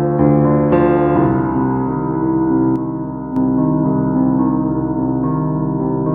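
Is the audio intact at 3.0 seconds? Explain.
No. One channel drops out from 2.76 to 3.36 s, a stretch of about 0.6 s that includes 3.0 seconds. The music suddenly falls by about 6 dB, then returns to full level at 3.36 s. The likely cause is that one side of the stereo pair went silent. Folding the remaining channel to mono then leaves only half of the shared material, and anything carried solely by the missing side vanishes until it comes back.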